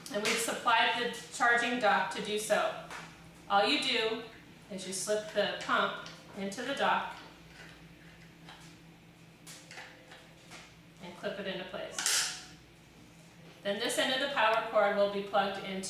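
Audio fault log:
No faults were found in this clip. Nothing in the audio calls for an entry in this log.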